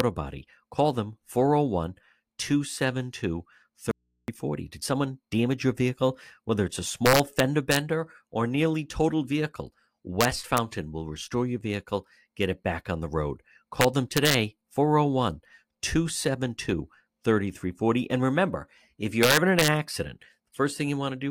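A sharp integer overflow crack hits at 0.00 s. A sample reached the integer limit and wrapped to the opposite sign instead of being held there.

An audio dropout to a faint residue follows at 3.91–4.28 s. About 370 ms of signal cuts out abruptly. Only mains hum remains, about 50 dB down. The likely cause is a lost signal feeding a path that stayed live.

More integer overflow cracks land at 7.06–7.76 s after "it's a", at 10.21–10.58 s before "will restore your vehicle", at 13.81–14.34 s after "back on the road", and at 19.23–19.68 s. Loud peaks run about 1 to 2 dB over the limit. They flip across the full range. Each is a violent crack, much sharper than clipping.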